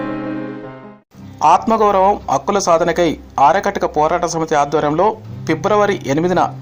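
No technical faults are audible.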